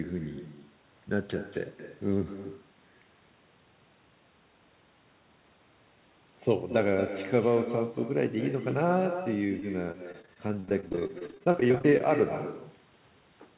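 From the start there's echo with no canceller: the speech comes back roughly a fifth of a second late, about 10 dB quieter and thin. Between 9.24 and 12.02 s, repeated packet loss makes it robotic, with dozens of gaps up to 30 ms each, patched by stretching the last sound, so it's choppy with pieces missing.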